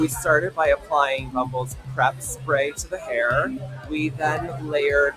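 A speech noise suppressor stays on for the whole clip. It treats steady sound as noise, so levels pump and swing by roughly 15 dB.

Sound is cut by the noise suppressor at 1.72–1.91 s, 2.12–2.48 s and 3.62–3.91 s. Held sound sinks by about 10 to 12 dB, then returns.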